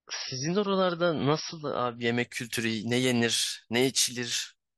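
From the start to 2.0 s the player is on an adaptive stream starting at a low bitrate: it opens on a cheap version of the stream to get going quickly, then switches up once it has gauged the connection. Until the switch, the speech has nothing above 5.8 kHz and carries heavier codec artefacts, which points to a low-rate MP3 of around 24 kbit/s. At 2.0 s the treble returns abruptly, with no gap, consistent with a step up to about 128 kbit/s.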